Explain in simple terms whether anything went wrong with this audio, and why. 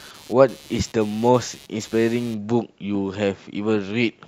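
Yes. From the start of the clip to about 2.34 s, a buzzing, scratchy noise sits underneath the speech. This is computer activity noise. When the computer's processor, graphics card or mouse suddenly works harder, the changing current disturbs the electrical ground that the audio circuit shares, and that disturbance leaks into the recording. Here it pulses roughly 150 times a second, quieter than the speech, and it stops after 2.34 s.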